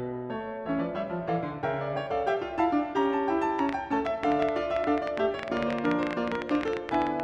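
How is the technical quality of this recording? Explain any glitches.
The second half of this music clip has a clear problem: a train of clicks. From 3.59 s to 7.21 s there are around forty sharp, near-identical ticks at roughly 11.6 per second, unevenly spaced and poking well above the music. That's likely interference or a faulty connection injecting pulses.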